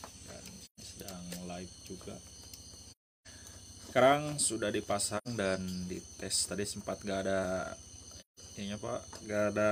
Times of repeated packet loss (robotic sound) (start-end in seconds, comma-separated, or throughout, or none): none